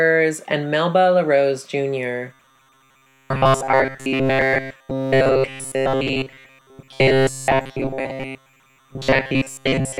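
The clip is speech with two faults. Timecode bleed runs throughout. A faint chirping warble sits behind the speech, roughly 40 dB below it. It flips between tones near 1 and 2 kHz. That is linear timecode at 30 frames per second leaking in from a neighbouring track or cable. From 2.33 s to the end, the speech turns into a rigid, metallic buzz at 133 Hz that still roughly tracks the words. This is robotic sound from repeated short buffers. The likely cause is starved playback repeating a chunk of about 7.5 ms while most of the real audio is skipped.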